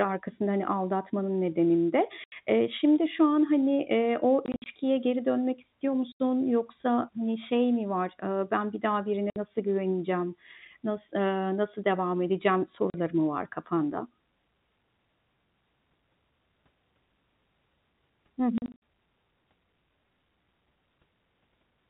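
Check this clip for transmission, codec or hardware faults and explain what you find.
Packet loss filled with silence breaks up the speech six times: 2.24–2.32 s, 4.46–4.66 s, 6.12–6.20 s, 9.30–9.36 s, 12.90–12.94 s and 18.58–18.80 s. The 4.46 s and 18.58 s stretches are scattered bursts of runs up to 60 ms. Every gap is a multiple of 20 ms, which fits 20 ms packets that were lost and replaced with silence. Each gap has hard edges, for example right after "geri dönmek istiyor" and after "eee nasıl devam edeceğim". The G.711 telephone band limit below 4 kHz is audible throughout.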